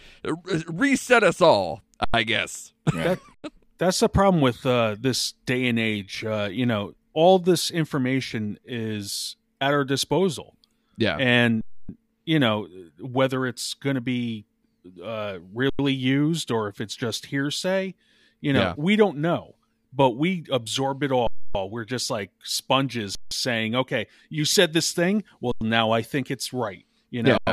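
Speech with eight underruns with held sample, at 2.04, 3.34, 11.61, 15.70, 21.27, 23.15, 25.52 and 27.38 s. The output runs dry and the waveform freezes flat for 93 ms (sometimes 162 or 279 ms, e.g. right after "just like sponges") before continuing softly with nothing skipped, which fits a 4096-sample buffer.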